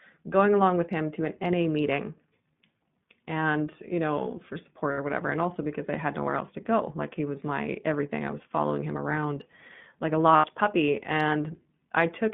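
Throughout, the speech is narrowband iLBC coding: nothing below about 150 Hz or above 3.6 kHz, with a rough, synthetic edge that fits 15.2 kbps and 20 ms frames, unlike wideband codec smearing. At 4.92 to 4.99 s, between "and you know for" and "or whatever", lost iLBC frames leave 60 ms of held, buzzy vowel, and at 10.36 to 10.46 s, after "him around like a", the same happens for 80 ms. These fit three and four lost frames, and the speech recovers immediately rather than dropping to silence.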